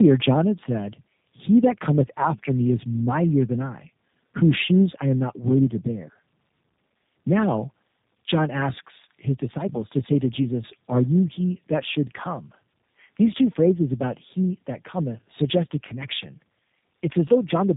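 Tandem speech coding throughout this speech: two low-rate coding passes, consistent with 8 kbit/s G.729A twice, the second re-coding the first's degraded output, leaving rough, warbly sound cut off above 3.8 kHz.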